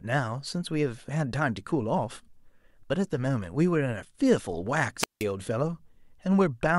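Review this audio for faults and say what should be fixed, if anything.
There's a wireless microphone squelch dropout at 4.99 to 5.25 s: the RF signal fades, hiss rises, and the receiver mutes for about 172 ms before the speech comes back. To prevent it, move the receiver antennas closer with clear line of sight, and check transmitter batteries and frequency coordination.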